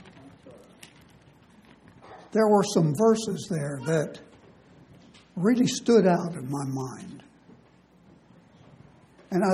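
No technical faults can be heard anywhere in this audio. Nothing breaks the sound at any point, with no interruption, distortion or change in level from the first moment to the last.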